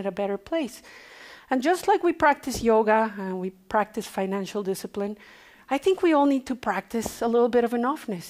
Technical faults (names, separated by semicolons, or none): none